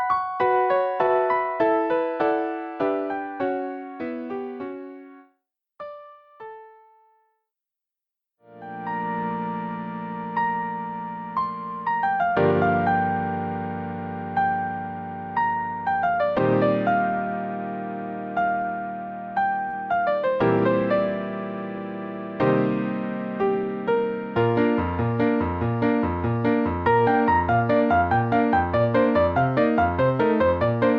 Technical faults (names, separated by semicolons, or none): short stall from a late packet